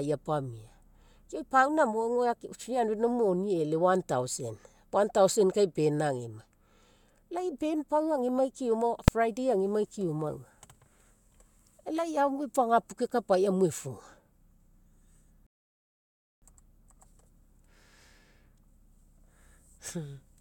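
A speech clip with two distinct faults. At 9.08 s, between "band pau agemai keoma" and "friday agemai keoma", there is a single sharp bang from invalid numbers at full scale. A calculation produced infinite or undefined values that were forced to the largest possible sample value for one processing block of about 2.7 ms, which fits a 128-sample block. Because the block is so short, the ear hears one bang rather than a separate pop at each edge. On a waveform it appears as a thin slab pinned flat at one extreme value, far beyond the speech peaks. On a spectrogram it is a bright vertical stripe running through every frequency. Later, from 15.47 s to 16.42 s, a rebuffering stall cuts the audio to silence. The player ran out of downloaded data and waited for more, then resumed exactly where it had stopped. No speech is lost, but about 0.95 s of dead time is inserted. The waveform shows a flat, empty gap there, and the spectrogram shows a blank band with the speech continuing cleanly on either side.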